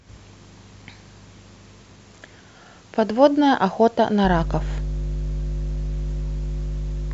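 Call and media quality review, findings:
Mains hum from 4.24 s to end of clip at 7.13 s. Steady 50 Hz tone with low harmonics under the speech, loud, only a few dB below the talker. Probable source: ground loop or nearby transformer, coupling the power line straight into the signal. Worth checking grounding and cable routing on that end.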